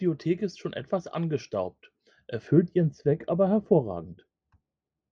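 From 2.48 s to the end, the speech turns dull and muffled because of de-emphasis applied wrongly. A treble cut meant to reverse pre-emphasis has hit audio that never had any, or has been applied twice, so the highs roll off in a smooth, gradual slope, about 11 dB down at 10 kHz relative to 1 kHz. Unlike a low-pass filter or a codec's bandwidth limit, there is no sharp cutoff edge, just a steady tilt that dims sibilance and air together.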